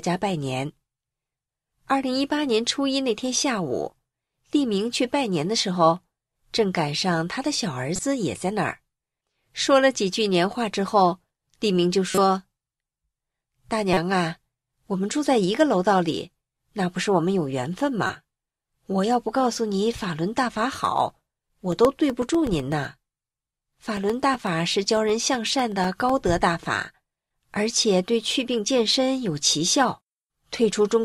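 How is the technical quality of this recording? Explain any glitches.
The recording has two kinds of technical fault: a few short decoding glitches earlier on, and a run of regular ticking later on.

Corrupt frames decoded occur at 7.95–7.99 s, 12.11–12.18 s, 13.93–13.97 s and 18.07–18.10 s. Each spans two or three damaged compressed frames that the decoder played anyway. Misread gains and codes put energy at the wrong frequencies, so each is heard as a brief chirp or burst of noise.

Periodic USB or driver dropouts run from 20.85 s to 26.10 s. Every 0.125 s, something blocks the audio path and about 1 ms of signal is replaced with silence, around forty times in all. The result is an even train of small ticks at eight per second, audible only while speech is present.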